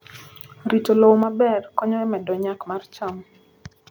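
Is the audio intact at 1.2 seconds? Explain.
No. At 1.23 s the microphone volume was stepped down, likely by the call software reducing input gain, so the speech suddenly drops about 5 dB just before "maber konyo e medo".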